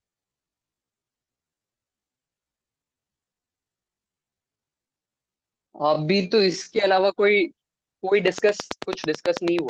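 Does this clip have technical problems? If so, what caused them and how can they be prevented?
Yes. From 0.0 to 6.78 s the speech is a time-stretched section, slowed to about 0.6 times normal speed. The pitch holds, but the pace drags. Short pieces were likely repeated to fill the length. To prevent this, record at the needed length rather than stretching in software.

A regular train of clicks runs from 8.28 s to the end, about 9.1 per second. The ticks stand well above the speech and continue through pauses. The likely cause is electrical interference or a faulty connection. To prevent this, keep cables away from other equipment and check the interface's connection.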